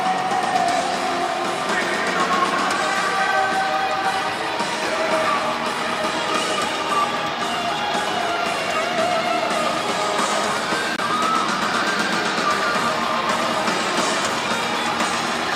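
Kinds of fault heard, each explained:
Corrupt frame muted: a couple of compressed frames got damaged, the decoder threw them out, and the player filled the gap with silence, so around 10.96 s the sound just drops out for about 44 ms, which fits two lost frames, then picks up on time.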